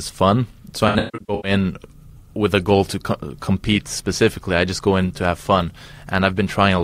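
AAC frame loss with concealment hits this speech clip from 0.88 to 1.51 s. About 0.4 s of audio drops out in bursts, the longest around 150 ms. The decoder patches each gap from the last good spectrum, leaving smeared, noisy, phasey stretches.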